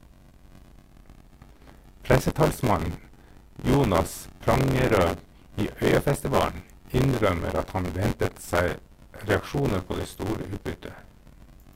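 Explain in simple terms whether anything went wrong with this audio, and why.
Buffer tearing throughout: a robotic buzz near 94 Hz rides on the speech, because part of each audio chunk replays sound from about 20 ms earlier.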